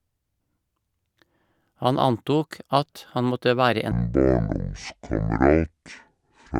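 A section at the wrong speed runs from 3.92 s to the end of this speech clip, slowed to 0.52 times and roughly ten semitones lower, likely from playback against a mismatched clock.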